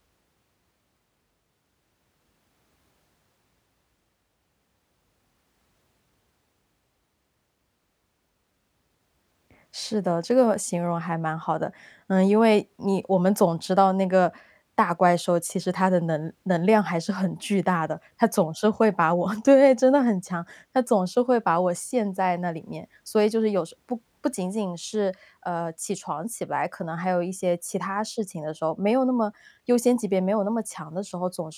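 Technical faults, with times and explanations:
No technical faults detected.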